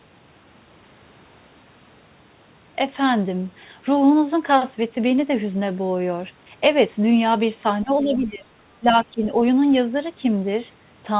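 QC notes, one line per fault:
7.83–8.5 s and 8.8–9.24 s, speech suppressed in double talk: the speech level sags by up to roughly 15 dB, half a second in the first stretch and about 0.3 s in the second, with parts of syllables thinning or dropping out. Most likely the echo canceller mistook overlapping far-end talk for echo and attenuated everything. On a waveform the envelope pinches in both spans. On a spectrogram the energy fades there, all within the band that stops at 4 kHz, which fits a G.711 call path.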